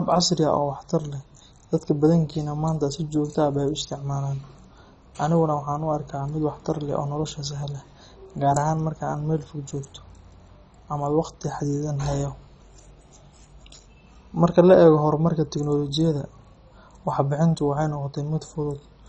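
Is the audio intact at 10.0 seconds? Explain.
No. At 10.0 s, as across the whole recording, the speech has likely passed through MP2 compression at a very low bitrate, which fits roughly 32 kbps. With too few bits for its 32 sub-bands, the encoder shuts off the upper bands entirely, leaving nothing above 10.4 kHz, makes bands drop in and out, and quantises the remaining bands coarsely. The result is heavy damage: dull, muffled speech carrying a gurgling, granular distortion.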